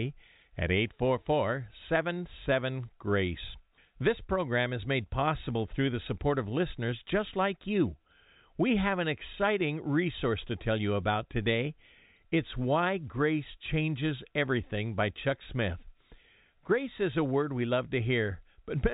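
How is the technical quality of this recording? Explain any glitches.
No glitches: the speech sits in the narrow band of G.711 telephone coding, with nothing above 3.8 kHz and at most faint coding noise tracking the signal level.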